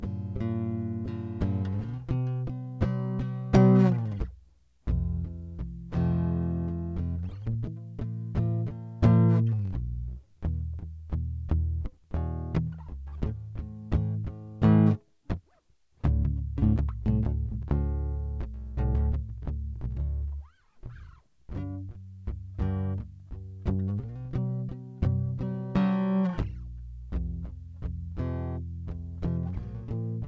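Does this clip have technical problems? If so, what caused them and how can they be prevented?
Yes. Wrong sample rate throughout: the music plays at 0.73 speed and about 5.5 semitones low, fitting 22 kHz audio played at 16 kHz. Pitch and tempo fall together, unlike a time-stretch. Prevent it by resampling to the playback device's rate.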